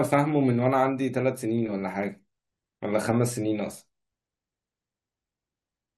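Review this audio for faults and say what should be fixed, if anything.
Compressed frames skipped at 2.08 to 2.10 s: the speech jumps ahead by about 20 ms, the span of one or more coded frames that went missing or were rejected by the decoder as damaged. To prevent it, protect the file against corruption and truncation during storage and transfer.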